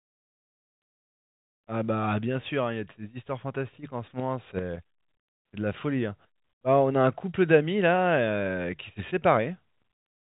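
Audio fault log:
No faults heard.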